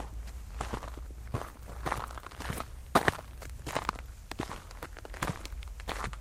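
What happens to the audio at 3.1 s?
At 3.1 s the sound is inside a call bitrate drop from 1.29 to 3.49 s. The encoder is starved of bits. Audio turns coarse and muffled, consistent with roughly 64 falling to 22 kbps.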